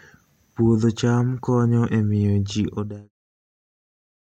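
No technical faults are audible.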